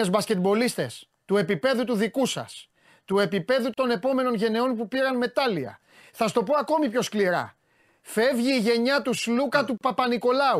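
At 3.74 s, between "του επίπεδου" and "επόμενων γενεών που πήραν", the speech drops out for about 37 ms, and again at 9.78 s for about 34 ms, six seconds later. Both are gaps at a join of encoded pieces: separately encoded segments were butted together with their encoder start delay and final-frame padding left in. Each gap has smeared edges, and the speech resumes exactly where it broke off.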